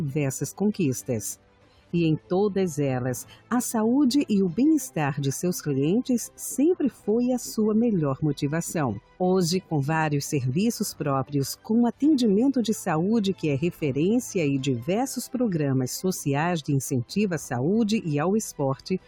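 A noise suppressor applied to music or sounds runs throughout, treating steady tones and tails as noise, so the level swings by roughly 10 dB and the sound pumps and thins. Sound cut by the noise suppressor appears at 1.36–1.93 s, 3.24–3.51 s, 6.91–7.07 s, 9.01–9.2 s and 18.76–19.07 s, with sustained or decaying passages dropping by about 10 to 12 dB.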